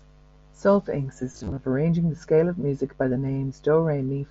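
From 1.32 to 1.57 s there is concealed Bluetooth headset packet loss. About 140 ms of audio goes missing, scattered over roughly a quarter second. The receiver fills each gap by repeating the best-matching stretch of recent waveform. The longest run is 30 ms, so the patching turns briefly buzzy and tonal, with small warbles as real audio returns. At 3.27 s there is a loss of two frames, about 15 ms. Both sit within mSBC wideband speech.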